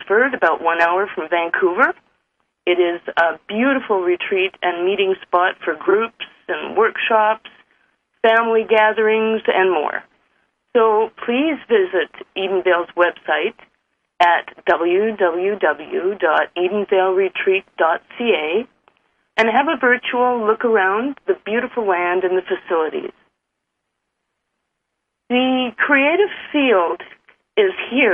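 Brief garbled flutters, at 5.88 to 5.94 s, 24.45 to 24.50 s and 26.87 to 26.93 s, are frames out of order: two neighbouring blocks of about 23 ms each swapped places, with no time lost.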